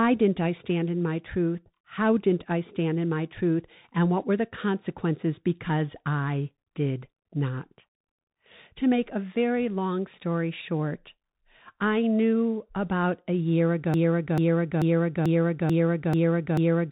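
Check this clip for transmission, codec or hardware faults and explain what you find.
Two faults are audible: a narrowband codec colouring the whole clip, and a stuck loop at the end.

Throughout, the speech sounds muffled and grainy, with scratchy s sounds and a fine hiss beneath it. This is the Bluetooth CVSD headset codec. Nothing above 3.8 kHz survives, and its one-bit adaptive steps, which fit a 64 kbps link, can't keep up with loud, bright sounds.

From 13.94 s to the end, just after "knew about a year", a 0.44 s fragment repeats seven times back to back, and the speech that should follow is gone. This is a broken-record loop, most likely a stalled player or stream resending its last buffer.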